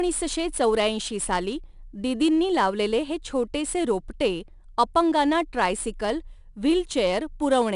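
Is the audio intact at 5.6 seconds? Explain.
No. At 5.6 s, as across the whole clip, the speech carries a gritty hiss that rises with every loud syllable, and nothing reaches above 10.6 kHz. This is 4-bit ADPCM compression: each sample is stored as a coarse step from a prediction, so the error tracks the signal level, and the stream runs at about 89 kbps.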